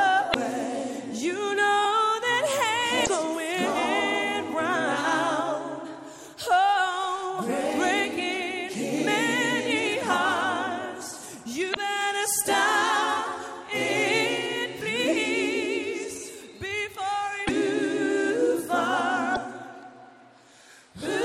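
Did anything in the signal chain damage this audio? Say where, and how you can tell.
Yes: damaged data in a compressed stream, at the codec. Brief 56 ms glitches at 0.30, 3.02, 11.72, 17.44 and 19.32 s come from the decoder misreading corrupt frames and resyncing.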